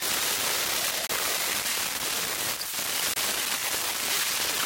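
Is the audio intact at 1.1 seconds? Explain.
No. A Bluetooth dropout likely occurred: packets missed their deadline at the headphones and were discarded, which fits a single lost frame of about 23 ms. The output falls silent with abrupt or briefly faded edges from 1.07 to 1.11 s, then resumes further along, skipping the missing moment.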